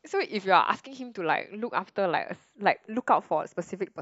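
From start to finish, the two channels drift apart. They come from devices on separate clocks, about 30 ppm apart. The delay between them slides to a fraction of a millisecond. Summed to mono, comb notches sweep through the speech. It sounds like slow flanging.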